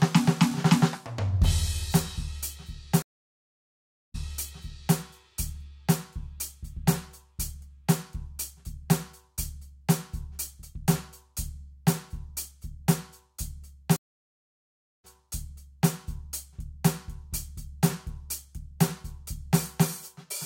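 At 3.02 s the music cuts out for about 1.12 s. This is a stream reconnect: the connection dropped, and the player rejoined with a new decoder. Playback resumes about 0.84 s earlier than where it stopped, so a short passage repeats. The event ends by 4.98 s. The same fault returns at 13.96 s. This time the silence lasts about 1.08 s and the music steps back about 0.86 s, settling by 15.90 s.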